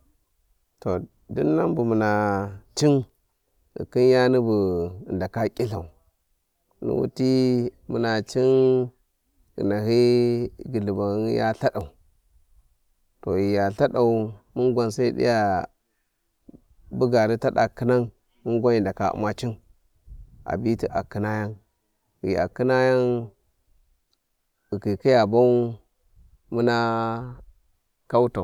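A speech recording with one fault. At 3.03 s there is a short burst of loose connector crackle, lasting about 66 ms, to 3.10 s. It sounds like irregular scratching layered over the audio. A worn or dirty contact in the signal path is making and breaking as it shifts. Each break chops the signal. Any DC sitting on the line jumps at those moments, adding pops to the crackle.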